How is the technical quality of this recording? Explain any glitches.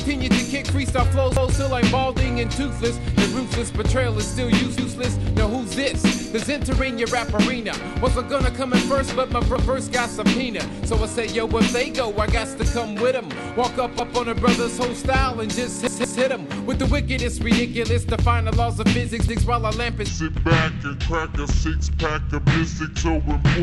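The recording has two kinds of glitch: a recurring stutter and a slowed final stretch.

Repeated buffer at 1.37, 4.78, 9.56, 14.0, 15.87 and 19.29 s. New audio arrived late, so the player replayed its last block of about 170 ms, which fits an 8192-sample buffer. Each is heard as a hard-edged stutter. At 15.87 s the block sounds three times, to 16.21 s.

Section at the wrong speed from 20.09 s to the end. The audio plays at 0.689 times its recorded speed, likely from being fitted to the wrong clock. Pitch drops about seven semitones, and everything turns deep and slow together.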